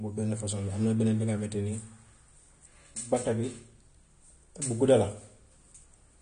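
Throughout the speech, AAC compression damage is plainly audible. Nothing is heard above 9.7 kHz, and the dull, smeared, warbling sound likely comes from a low bitrate near 32 kbps.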